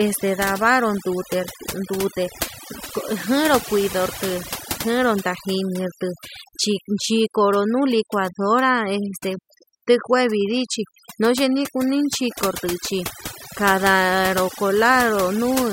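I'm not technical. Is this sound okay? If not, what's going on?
No, not quite. The whole clip has overdone noise removal: a cleanup tool was pushed too hard, so the background drops and breaks up into little twinkly sparkles, and quiet parts of the speech got scrubbed away too.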